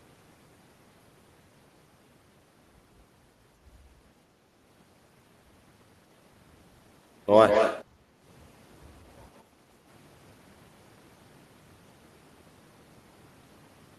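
From 7.48 to 7.84 s a distinct copy of the speech trails about 179 ms behind, only slightly quieter. This is likely an echo leak: a discrete repeat rather than a smooth reverberant tail. Right after, from 7.85 to 8.22 s and again from 9.44 to 9.59 s, the background is gated by the echo canceller, dipping about 7 dB and then about 6 dB before snapping back. These are brief hard drops in room sound, not a gradual pumping.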